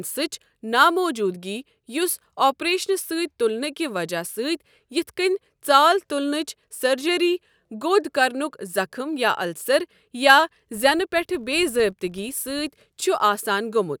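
Speech, with a buzz from 10.75 s to 12.78 s. It is a filter restarted on every block. Instead of carrying its memory forward, the filter begins each block from silence. That leaves a small transient at every block edge. The ticks arrive at about 46.9 Hz, so they fuse into a low buzz. That rate fits a 1024-sample block at 48 kHz. The buzz follows the speech level, louder on loud syllables and fading in the pauses.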